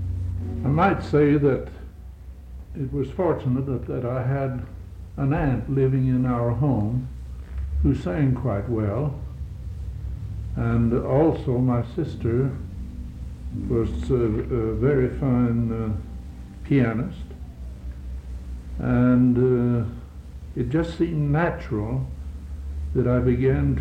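No faults are audible anywhere in the clip.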